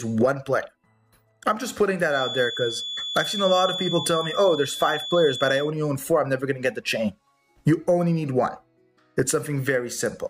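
A feedback whistle runs from 2.06 to 5.74 s: a thin, steady tone at 3.4 kHz sits roughly 10 dB below the rest of the audio, swelling and fading slowly in level without growing. This is likely a loudspeaker-to-microphone loop held right at the edge of feedback, where one high frequency keeps recirculating and ringing on but never gains enough to run away into a howl.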